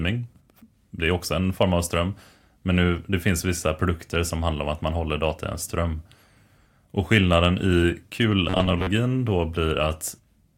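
From 8.50 to 8.92 s the speech turns into a stiff, metallic buzz pitched near 94 Hz: robotic sound from repeated short buffers. It's likely that audio arrived too slowly and a roughly 11 ms chunk kept repeating, so around two-fifths of the real audio got skipped.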